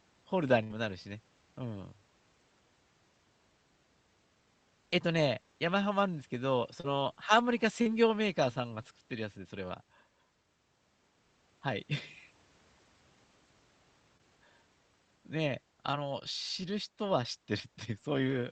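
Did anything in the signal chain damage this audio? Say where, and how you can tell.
Yes. At the network stage, a burst of packet loss runs from 0.63 to 0.72 s. About 60 ms of audio is lost, and the receiver stretches the last sound into a decaying buzz or hiss. On a spectrogram the harmonics freeze and fade, then cut abruptly into later material.

Short concealed packet loss, also network-side, occurs at 6.80 to 6.86 s, 7.82 to 7.87 s and 14.17 to 14.21 s, each losing 20 to 40 ms of audio. The decoder extrapolates briefly and crossfades back, so you hear a smear or wobble. The waveform shows a slightly too-regular patch rejoining the real audio, with the spectrogram band-limited near 8 kHz by the codec.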